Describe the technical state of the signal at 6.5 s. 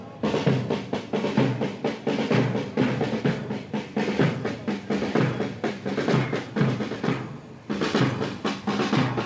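At 6.5 s the signal is intact, with no dropout, glitch or distortion, only the ordinary band limit of the call path, which leaves nothing above 8 kHz.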